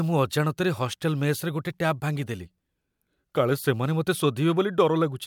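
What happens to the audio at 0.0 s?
Nothing goes wrong at 0.0 s; the audio is intact at that point.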